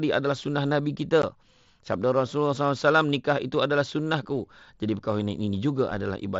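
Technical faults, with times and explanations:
1.22 s, unconcealed Bluetooth headset packet loss: a 15 ms hole with hard edges, likely two dropped mSBC packets, leaves a brief gap in the speech.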